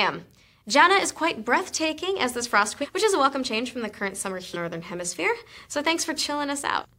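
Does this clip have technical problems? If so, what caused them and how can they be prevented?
Yes, there are compressed frames skipped at 2.81, 4.53 and 6.81 s. The sound jumps ahead by roughly 300, 400 and 200 ms, fitting whole missing 46.4 ms frames. Verify file integrity after transfer and use error-resilient delivery so damaged frames get re-sent instead of dropped.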